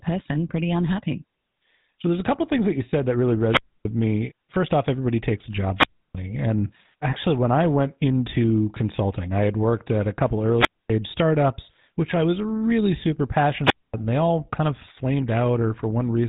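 The whole clip passes through the GSM full-rate codec, which fits 13 kbps. Its pulse-driven vocal model leaves plainly audible buzzy roughness, and nothing above 3.8 kHz survives.

Wireless microphone squelch dropouts follow. The radio link fades, so the receiver mutes: a rise of hiss, near silence, then the voice returns. They come at 3.44 to 3.89 s after "you said that really", muting about 0.28 s; at 5.75 to 6.15 s after "off everybody takes a", muting 0.31 s; at 10.50 to 10.94 s, muting 0.25 s; and at 13.63 to 13.94 s, between "I was really super" and "and they all kind", muting 0.24 s.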